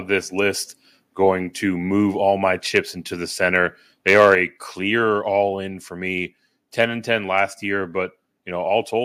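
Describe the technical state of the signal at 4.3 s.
At 4.3 s you're right inside a stretch of microphone overload, running from about 4.08 to 4.35 s, just after "into the center". The peaks there push roughly 5 dB past what the converter can hold, most likely because the mic input was set too hot, so the tops of the waveform get sliced flat. Only a small share of samples actually hit the ceiling, but it's enough to put a harsh, crackly edge on the loudest syllables.

Right at the end of that, at 4.35 s, the microphone volume steps down by about 4 dB in one go, just before "a clear all in". It sounds like the call software reacting to the clipping it just caught and pulling the input gain back. Both the voice and the background drop in level together, abruptly, with no fade.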